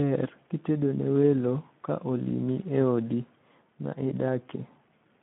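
A speech clip carrying the Speex codec throughout, and the damage is plainly audible: a hoarse, noisy texture from starved excitation, a band of roughly 150 Hz to 3.5 kHz, and nothing above 3.8 kHz, which fits a low setting around 11 kbps.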